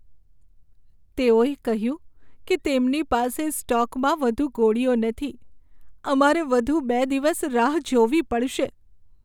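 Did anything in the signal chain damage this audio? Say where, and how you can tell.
No, nothing along the chain from capture to playback has left an audible mark on this speech recording. Listening for a damaged stage turns up nothing to point to at any moment in the clip.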